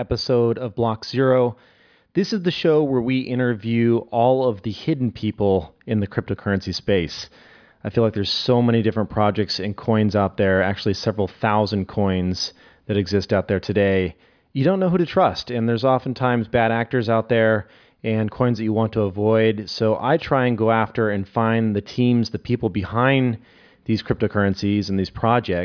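A spoken recording with nothing technically wrong to report anywhere in it.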